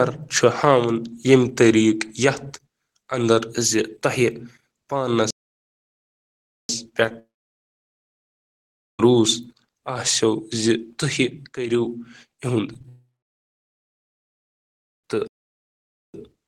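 At 5.31 s the speech halts in mid-flow and stays silent until 6.69 s, a gap of about 1.39 s. This is a playback stall, likely the player running short of data or its thread being blocked. On a waveform it appears as an abrupt flat line with no fade on either side. A spectrogram shows a clean vertical band of emptiness cutting straight through the speech energy.

From 7.04 to 7.15 s, repeated packet loss gives the sound a choppy, robotic edge. Four separate holes, the longest only 11 ms, were each patched by extending the preceding sound, so about 37% of this short span is synthetic fill. The spectrogram shows harmonics that turn briefly smeared and comb-like and then stutter back. The waveform looks jagged, with small repeated cycles.

Almost immediately, at 7.19 s, a long network dropout begins. It was likely caused by nothing arriving over the link. The last sound is stretched into a brief fading continuation, and then about 1.7 s of near silence follows before the speech returns at 9.00 s, with roughly 1.8 s of content gone. 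The waveform shows a short decaying tail followed by a flat trace. On a spectrogram, a smeared stripe fades into blank space.

Between 12.74 and 12.85 s, three bursts of short concealed packet loss, each only 10 to 20 ms, cause tiny smears and wobbles as the decoder bridges each hole and blends back into the real speech. On a spectrogram these show as slight blurs in the harmonic lines. On the waveform they appear as small discontinuities in otherwise regular cycles.

A second long network dropout follows at 12.89 s, likely from the same kind of link failure. A brief fading continuation gives way to about 2 s of silence, and about 2.15 s of audio is lost before sound resumes at 15.05 s. It looks like the earlier dropout: a short decaying smear, then an empty band.

Finally, at 15.28 s a second playback stall cuts the sound off abruptly for about 0.86 s, likely from the player starving again. 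It resumes at 16.14 s with the same flat, hard-edged gap on the waveform and the same vertical blank on the spectrogram.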